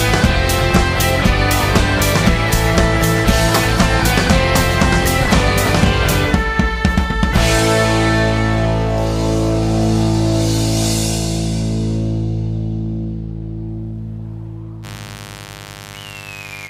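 From 14.82 s to the end at 16.69 s, a mains buzz sits under the sound, roughly 20 dB below it. Sharp switching spikes locked to the 50 Hz supply leak into the path, producing harmonics up into the kilohertz range, heard as a steady, raspy buzz.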